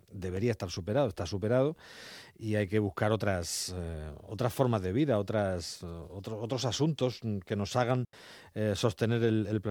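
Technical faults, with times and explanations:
0.37 s and 7.12 s, blocks of digital silence: the program likely failed to fill its output buffer in time, so about 2.6 ms and then 4.2 ms of samples became zeros. With no fade at either edge, each gap is heard as a sharp tick, the first just before "estar superado está superado", the second between "de vida otras otros" and "que nos hagan".
8.05 to 8.13 s, digital wireless dropout: the radio link lost too much data and the receiver muted for about 85 ms, right after "que nos hagan". A very short fade in and out leaves a clean hole of near silence, with no burst of noise on either side.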